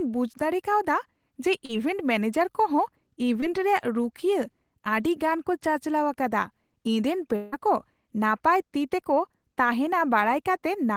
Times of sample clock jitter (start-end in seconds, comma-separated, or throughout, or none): none